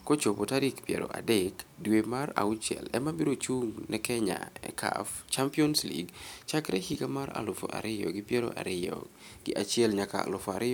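No technical faults can be heard anywhere in the recording; the signal remains continuous and steady for its entire duration.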